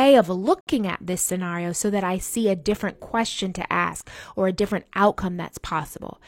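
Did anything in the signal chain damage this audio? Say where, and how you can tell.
Yes. At the playback stage there is a gap between stream segments from 0.61 to 0.67 s, just before "at this scenario so". Segment timestamps leave about 62 ms unaccounted for, and the player fills it with digital silence. The waveform drops to flat silence with abrupt edges, and the spectrogram shows a clean, full-band blank column.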